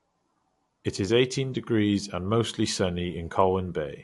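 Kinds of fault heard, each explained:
MP3 compression, throughout: the speech carries plainly audible codec damage, and nothing is left above 11.2 kHz. This is likely MP3 encoding at a low bitrate, one that fits roughly 52 kbps. Starved of bits, the encoder drops weak frequency lines that then flicker on and off between frames, giving a watery, swirly texture with metallic chirps on s sounds. It also cuts the treble off at a fixed point, here 11.2 kHz.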